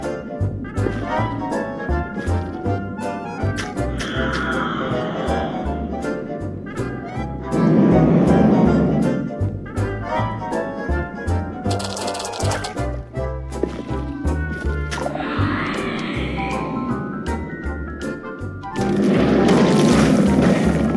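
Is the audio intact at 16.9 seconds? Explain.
Yes, the audio at 16.9 seconds is intact, with nothing breaking its continuity or quality at that moment.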